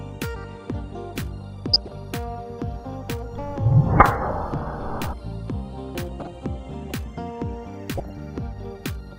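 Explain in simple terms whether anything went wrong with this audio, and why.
Three short bursts of DAB burbling, at 1.73 to 1.97 s, 5.89 to 6.28 s and 7.93 to 8.11 s, add short blips of noise to the sound. Weak digital radio reception corrupted the audio data. Unlike a dropout, the sound never goes silent.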